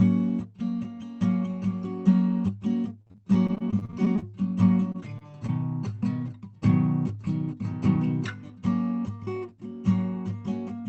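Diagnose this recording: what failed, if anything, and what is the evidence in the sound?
Repeated packet loss (robotic sound), 3.01 to 4.24 s: network stage. Fifteen gaps, the longest 38 ms, were patched by extending prior sound, leaving this music choppy.

Short stall from a late packet, 4.92 to 4.96 s: the jitter buffer emptied, so the receiver held the last sound about 21 ms before resuming, losing nothing.

Short concealed packet loss at 5.18 to 5.23 s and 5.47 to 5.50 s: roughly 20 ms each went missing, filled by continuing the preceding sound, heard as brief smears.

Jitter buffer speed-up, 7.15 to 7.97 s: to shrink excess buffered delay, about 40 ms of pitch periods were cut, so the music runs 3% fast at unchanged pitch.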